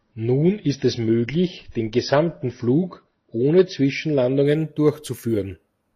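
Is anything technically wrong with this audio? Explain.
Yes. From the start to 4.46 s there is an adaptive stream starting at a low bitrate. The player began on a cheap, low-bitrate version to get playback going fast, then switched to a richer one once it had gauged the connection. Until the switch the speech sounds dull and smeared, with codec artefacts, which fits AAC at roughly 24 kbit/s. Afterwards it fits roughly 96 kbit/s. On a spectrogram, energy stops sharply at 6 kHz, then the full band appears abruptly at 4.46 s. The waveform shows no gap.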